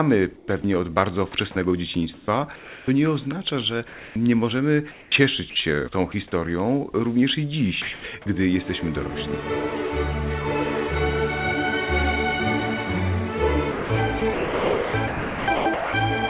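From 0.36 to 1.34 s the sound is chopped by the voice detector, likely because the sender's detector toggled on and off several times, so about 177 ms in short pieces is swapped for comfort noise. It sounds choppy. On a spectrogram, thin vertical bands of smooth, featureless noise interrupt the textured detail, all under the 4 kHz ceiling of the call path. The waveform shows brief, even noise patches.

From 2.14 to 2.88 s comfort noise replaces the background, likely because transmission paused during a quiet stretch. For about 460 ms the real ambience becomes a steady hiss, which the receiver generated to stand in for the missing signal. On a spectrogram the fine, irregular background texture gives way to a uniform wash, and the waveform envelope goes flat and even.

At 3.88 to 4.16 s the sound is dropped by the voice detector, likely after a soft passage was misjudged as background. Of the 280 ms replaced, about 110 ms of actual sound is gone, leaving steady noise until the detector triggers again. 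The spectrogram shows the sound's energy cutting off into a plain noise block, and the waveform shows the same sudden drop.

From 4.92 to 5.56 s the sound is chopped by the voice detector again, likely for the same reason, with about 260 ms replaced in fragments. The clipped edges show up as short noise strips in the spectrogram.

From 7.82 to 8.04 s the sound is dropped by the voice detector again, likely when a quiet ending fell below the detection threshold. About 120 ms of sound disappears within the 220 ms replaced, leaving a gap filled with featureless noise. It appears as a clean cutoff in the waveform envelope.

From 13.72 to 15.94 s the sound is chopped by the voice detector more heavily, likely from repeated switching, and about 1.5 s in total is replaced. Over this stretch the spectrogram alternates between detailed and smooth noise columns, and the waveform shows abrupt level changes.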